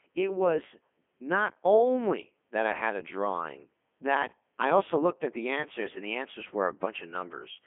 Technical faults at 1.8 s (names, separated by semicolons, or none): Codec 2 vocoder